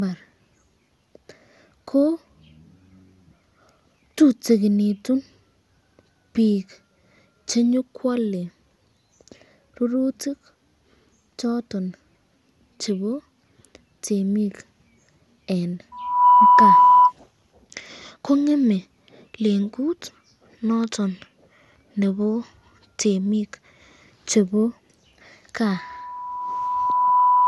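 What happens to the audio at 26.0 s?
At 26.0 s a loudspeaker feedback squeal is building. It begins at 25.64 s as a pure tone near 991 Hz and swells over roughly a second and a half as the microphone re-amplifies its own loudspeaker output. It then sits about 5 dB above the signal until the clip ends at 27.47 s.

Beneath the squeal the sound is swirly, hollow and smeared, with nothing above 11.9 kHz. This is generation loss, likely from repeated lossy re-encoding, about three passes, in a chain consistent with MP2 at 96 kbit/s, each pass adding fresh quantisation noise.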